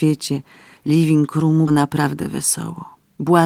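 At 1.67 to 1.69 s the speech lurches forward with no gap or fill, a fraction of a second of it simply gone and the two sides butted together. This is a skip ahead: roughly 400 ms of audio was dropped while later audio was already queued, so playback jumped straight to it.

From 1.77 to 2.28 s, and again from 2.95 to 3.41 s, the speech sounds rushed but keeps its pitch, running at about 113% and 114% of normal speed. This is jitter buffer speed-up: with too much audio held, the receiver trimmed short pitch-period slices repeatedly, removing about 70 ms in each stretch.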